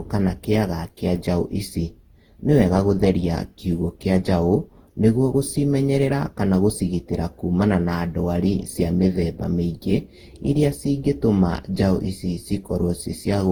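From start to finish the speech carries a swirly, hollow smear: consonant attacks blur, heavier than a single lossy pass would leave, with content reaching up to about 20.1 kHz. The likely cause is generation loss, the audio having been decoded and re-encoded around ten times, with a character that points to Opus near 48 kbit/s. Each pass requantised on a shifted frame grid, so noise piled up.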